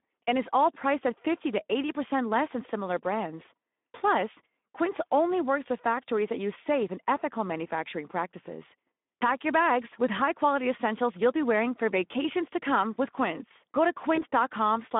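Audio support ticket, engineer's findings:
Speex codec, throughout: hoarse, noisy speech with plainly audible coding damage. Line band roughly 200 Hz to 3.6 kHz, which fits narrowband Speex at about 11 kbps. Too few excitation bits, so the CELP residual is coarse and grainy. Spectrogram: hard ceiling near 3.6 kHz, nothing above, little below 200 Hz, smeared harmonics and a noisy floor between formants. Waveform: rough, uneven cycle shapes in voiced segments.

VoIP packet loss concealed by the speech codec, 14.15 to 14.19 s: a brief stretched patch that fades. It fits a single lost 20 ms frame. The decoder repeats the last pitch and filter at falling gain, and the damage carries tens of milliseconds or more past the gap because each frame builds on the previous one. Spectrogram: frozen harmonic stripes fading out. Waveform: repeated identical cycles with a decaying envelope.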